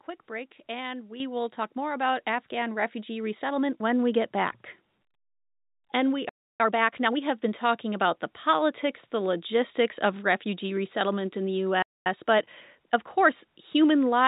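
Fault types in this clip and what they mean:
Microphone volume stepped up: at 1.2 s the whole signal jumps by about 8 dB in a single step and stays at the new level. Voice and background noise rise together, which points to the input gain on the device being raised, not to the talker moving closer. Call software that judged the microphone too quiet would make exactly this kind of abrupt change.
Playback stall: the speech drops out to silence twice, from 6.29 to 6.60 s (about 306 ms) and from 11.82 to 12.06 s (about 234 ms), the second straight after "refugee resettlement in the". In both, the sound halts mid-flow and then resumes. The likely cause is the player running short of buffered data or its audio thread being blocked, so nothing reached the output until it recovered.
Time-compressed catch-up: straight after each gap the speech comes out hurried but at normal pitch. The first stretch runs at 1.5x from 6.60 to 7.20 s, leading into "have been talking about", and the second at 1.25x from 12.06 to 12.98 s. 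The player is working off the backlog from the stall by cutting out short pieces and cross-fading across the joins.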